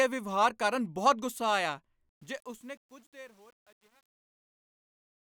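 Right after "ਕਾਰਨ ਬਹੁਤ ਗੁੱਸਾ ਆਇਆ", from 2.09 s to the end at 5.22 s, the speech fade-out shows truncation distortion. The fade starts around 2 s. Its gain stage drops low bits without dither, which points to only about 9 bits being kept. From 2.48 s the decaying speech turns gritty. The waveform shows staircase steps, and the spectrogram shows harmonic hash above the fading speech.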